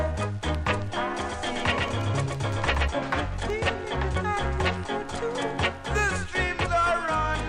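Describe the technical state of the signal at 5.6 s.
At 5.6 s the signal is intact, with no audible dropout, click, distortion or other fault at that point.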